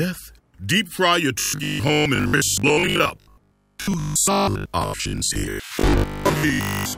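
Robotic sound from repeated short buffers runs from 1.40 s to the end at 6.97 s, likely because new audio arrived too seldom and a roughly 20 ms slice was looped to fill the gaps. Most of the sound is replaced by these repeats, imposing a rigid, metallic 50 Hz buzz.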